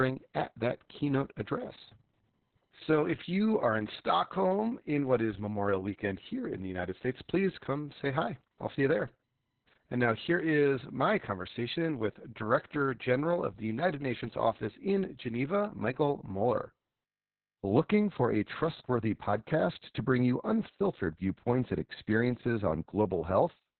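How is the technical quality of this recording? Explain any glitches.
Poor: heavy Opus voice compression affects the entire recording. Throughout, the speech sounds muffled, hoarse and faintly robotic. In narrowband SILK mode, the coder models the voice by linear prediction and quantises the excitation coarsely, consistent with a bitrate around 6 kbps. A spectrogram would show a hard, flat ceiling at 4.2 kHz with nothing above it, and smeared, blotchy harmonics below.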